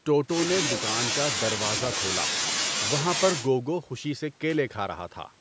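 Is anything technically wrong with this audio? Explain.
No, the speech shows no technical fault: it has passed through a call's microphone processing, which removes the lowest bass and leaves nothing above 8 kHz, as that processing normally does.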